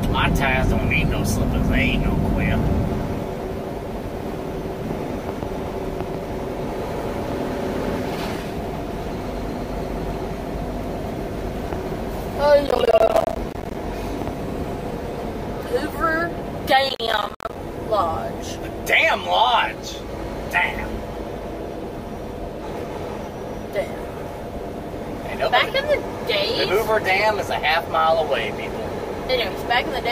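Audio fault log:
12.67–13.75 s and 16.89–17.55 s, processor overload crackle: the processor repeatedly misses deadlines for short buffers of roughly ten milliseconds, leaving dozens of hard-edged silent gaps that fuse into a gritty tearing crackle over the sound and stop once the load eases.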